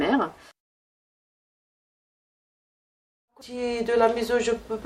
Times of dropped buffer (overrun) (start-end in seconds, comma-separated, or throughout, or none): 0.51, 3.41